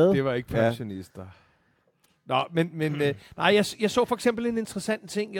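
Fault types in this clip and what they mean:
The speech signal stays steady and intact throughout, with nothing audible that points to a problem in recording, processing or transmission.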